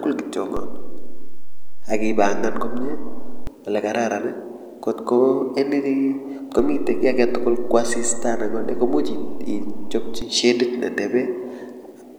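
Low thumps mark a DC step at 0.57 s and again at 6.59 s. The waveform's zero line jumps, by about -18 dBFS and then about -21 dBFS, holds, and drops back at 3.47 s and 10.22 s with matching thumps while the speech carries on unchanged.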